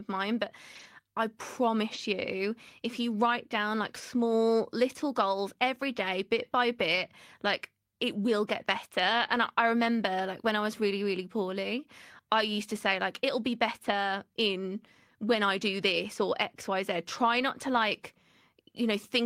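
Brief rough, noisy patches at 0.75–0.85 s, 1.93–1.99 s, 3.29–3.31 s, 6.91–6.97 s, 9.35 s and 17.73–17.79 s are lost packets rebuilt from error correction. The decoder played low-bitrate copies instead of gaps. On a spectrogram, each shows as smeared, grainy energy with no silent break.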